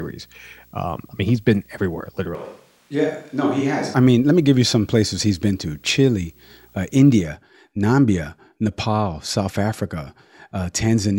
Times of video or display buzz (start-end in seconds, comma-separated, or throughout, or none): 0.00-7.23